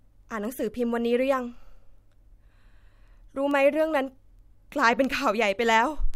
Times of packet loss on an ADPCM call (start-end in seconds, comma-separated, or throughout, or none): none